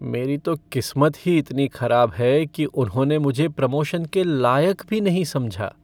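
No technical faults can be heard anywhere in the recording.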